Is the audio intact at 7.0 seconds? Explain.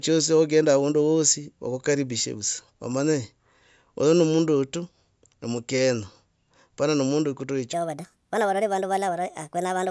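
Yes, at 7.0 seconds the speech plays through intact, with no audible fault at that moment.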